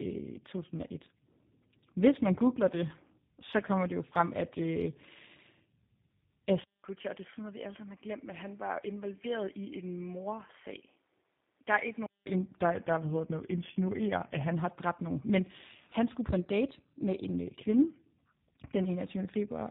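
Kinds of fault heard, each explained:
Tandem speech coding, throughout: the speech passed through a GSM full-rate coder, was carried as G.711 A-law, then coded again as G.729A, so two speech codecs compounded each other's errors. The result sounds rough, muffled and warbly, with nothing above 3.7 kHz.
Drift correction step, 12.61 to 14.54 s: playback slows by 5.93 percent and drops 106 cents, just over a semitone flat, then snaps back before "har dræbt nogen". This is likely a clock-matching routine changing rate in one step to rebalance its buffer.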